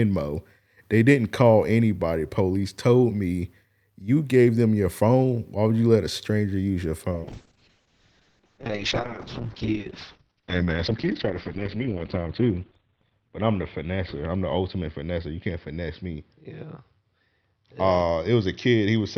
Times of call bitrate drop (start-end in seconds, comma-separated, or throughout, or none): 7.13-19.17